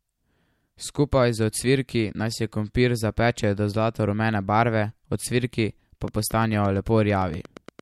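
A speech clip where, right after "zlato rumene barve ocvirki", a train of clicks runs from 6.08 s to 7.80 s: about fifteen regular pulses at 8.76 per second, near signal level, likely interference or a faulty connection.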